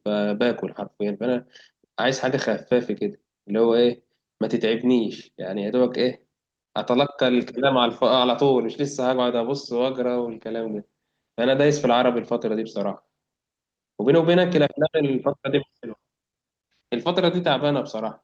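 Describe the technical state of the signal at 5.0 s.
At 5.0 s the speech comes through intact, carrying only the coding texture and the band limit of about 12 kHz that the Opus call path leaves throughout.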